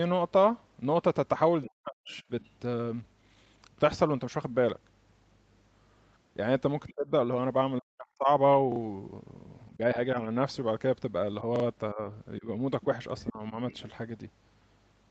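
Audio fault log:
1.63–2.50 s, 6.87–6.94 s, 12.81–13.77 s: other side's voice leaking through. A second voice sits under the talker. It is about 25 dB down at first and about 10 dB down near the end. Likely loudspeaker echo the canceller missed.
1.67–2.14 s, 6.95–8.29 s, 9.76–10.17 s, 11.93–13.54 s: speech suppressed in double talk. The talker's voice dips or drops out in pieces, nearly vanishing in the first two spans. The drop is milder later. Likely the echo canceller muting both sides at once.
8.72–8.80 s, 11.56–11.64 s: repeated buffer. A short piece plays three times with hard joins, heard as a quick stutter. The piece's length fits a 40 ms buffer replayed while new audio was late.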